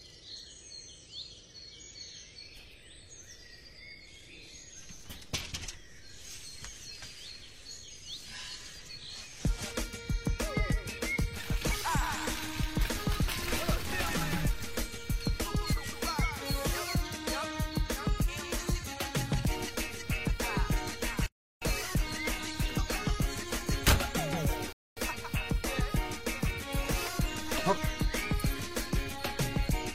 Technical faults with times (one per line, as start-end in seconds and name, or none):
21.26-21.62 playback stall
24.73-24.97 rebuffering stall